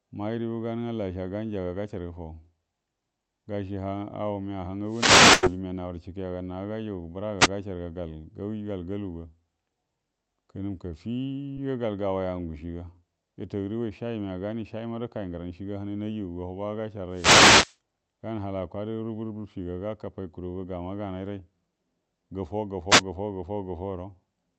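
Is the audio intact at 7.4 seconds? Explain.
No. From 7.39 to 7.49 s, roughly a tenth of a second, there is a wireless microphone noise hit: the analogue FM radio link fades briefly as reflected signals cancel, and the receiver's own noise surges up over the speech as a short swish of static. Unlike a packet loss in the call path, which would leave a gap or a smeared, robotic fill, this sounds like hiss laid on top of the voice.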